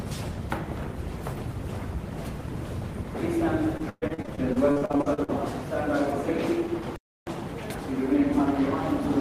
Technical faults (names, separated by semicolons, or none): repeated packet loss (robotic sound); playback stall